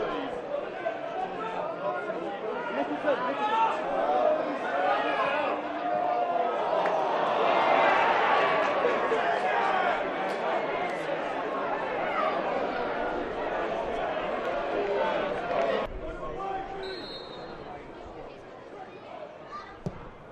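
No technical faults can be heard anywhere in this audio.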